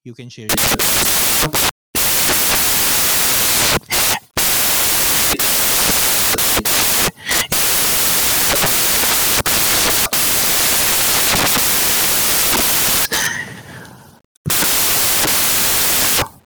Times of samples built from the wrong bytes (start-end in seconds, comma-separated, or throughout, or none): 0.49-16.46